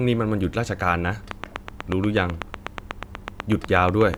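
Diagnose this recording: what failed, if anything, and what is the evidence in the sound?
A train of clicks runs from 1.31 s to 4.15 s: about twenty near-identical pulses at a steady 8.1 per second, peaking about 15 dB above the speech and continuing through the pauses. It points to the analogue wiring stage, likely interference from nearby equipment coupling periodic pulses into the signal path. On a spectrogram it shows as evenly spaced thin vertical broadband lines, and on the waveform as sharp spikes standing well proud of the speech envelope.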